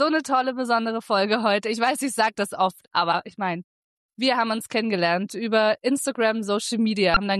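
At 7.13 to 7.17 s, near the very end, there is a burst of damaged data in a compressed stream. A short stretch of the encoded bitstream is corrupt, so the decoder misreads those frames, loses its lock on the frame structure and has to hunt for the next valid header. The result is a brief glitch about 34 ms long. A spectrogram shows a narrow vertical break in the surrounding pattern, and the waveform shows a short disturbed patch.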